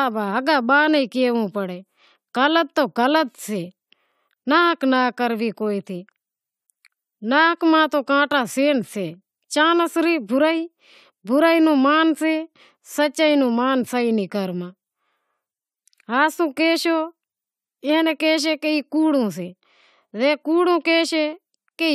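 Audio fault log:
Nothing to log here, as the speech comes through without any technical trouble worth noting.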